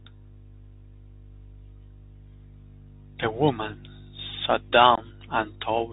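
From start to finish the speech carries the telltale sound of the Bluetooth CVSD headset codec. Everything above 4 kHz is simply gone, so it has that boxed-in narrowband quality, and the damage is plainly audible. CVSD tracks the waveform one bit at a time with a step size that adapts, which fits a 64 kbps link, and it can't keep up with sharp, bright sounds. The s sounds come out scratchy, with a grainy hiss sitting underneath.

Right near the end, from about 4.95 to 4.99 s, there's unconcealed Bluetooth headset packet loss. A handful of short voice packets between headset and phone didn't make it, and nothing patched over them. Roughly 26 ms of audio is missing within a 30 ms stretch, mostly as one hole of about 22.5 ms. You hear it as a quick, hard-edged dropout that can click at the edges, and the sound comes back quieter for a moment as the CVSD decoder recovers.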